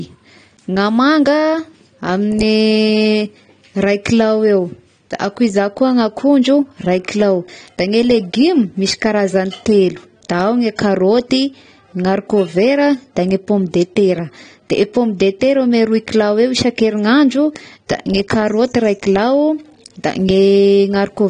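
AAC compression, most likely, runs through the whole speech clip: nothing reaches above 9.8 kHz, and the damage is plainly audible, which fits AAC-LC at a low bitrate around 32 kbps. The encoder splits each frame into frequency lines and spends its few bits only where the ear is most sensitive, discarding the top band and thinning the rest. The speech sounds dull and smeared, with a warbling, fizzy edge on sustained sounds and sibilants.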